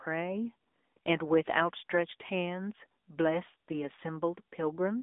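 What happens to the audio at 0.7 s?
At 0.7 s, as throughout the clip, the speech is carried through an AMR narrowband mobile codec. The encoder rebuilds the voice from a vocal-tract model excited by a few pulses per short subframe, and the bit budget here points to a mid-rate mode around 10 kbps. The line passes roughly 250 Hz to 3.6 kHz, with nothing above 3.7 kHz, so the voice sounds thin and muffled, with a plainly audible buzzy, synthetic edge.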